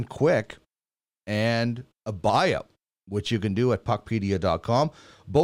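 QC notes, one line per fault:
No faults heard anywhere in this speech recording.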